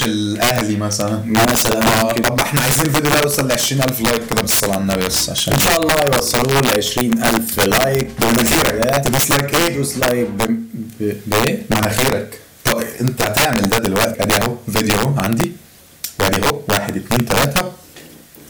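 Integer overflow runs throughout: gain drives peaks about 9 dB past the limit, and roughly 2 percent of samples wrap to the opposite sign instead of being held, giving violent cracks on loud moments. The waveform shows full-range sign flips; the spectrogram shows broadband vertical streaks.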